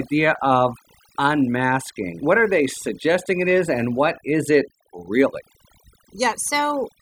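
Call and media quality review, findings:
Overdone noise removal, throughout. Noise suppressor set too aggressive: bands near the noise estimate are pulled to near zero, leaving a dead background with twinkling specks. Unlike a noise gate, the cuts act per frequency band, not on the whole signal.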